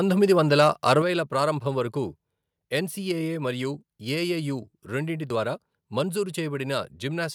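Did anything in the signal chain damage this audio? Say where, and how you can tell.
Yes. At the converter, likely microphone overload: from 0.59 to 0.92 s, peaks exceed full scale by about 3 dB, flattening around one percent of samples into harsh crackle.

In call processing, the microphone volume was likely stepped down at 1.02 s. Speech and background fall together by about 5 dB in one abrupt step, just after the distorted peaks.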